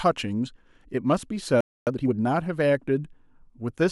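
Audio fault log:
1.61–1.87 s, playback stall: the speech cuts to silence for about 260 ms mid-flow, likely because the player ran out of data or its thread was blocked.
1.87–2.13 s, time-compressed catch-up: the player clears its backlog by cutting and cross-fading short pieces, so speech runs at 2.0x speed with unchanged pitch.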